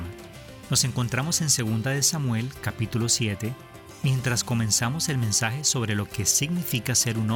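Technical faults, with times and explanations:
No technical faults can be heard in this clip. There is nothing here that calls for a time or an explanation.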